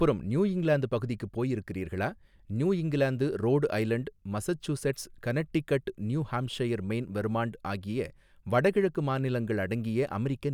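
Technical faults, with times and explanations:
Nothing in this recording stands out as a technical problem; it's a straightforward listen with no glitches to point to.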